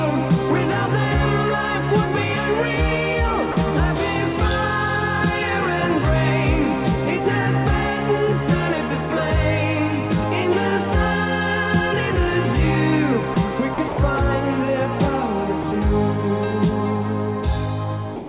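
At 3.52 s the sound briefly drops out for 40 ms and gives way to a patch of steady noise or near silence. The same thing happens in a cluster at 13.34 s (20 ms), 13.74 s (40 ms) and 13.88 s (100 ms), again at 15.62 s (20 ms), and finally for the last 130 ms from 18.16 s. It's likely sound dropped by the voice detector: the sender judged those moments to be background, stopped transmitting, and the receiver filled in comfort noise until the detector triggered again. The call path's ceiling of 4 kHz is audible throughout.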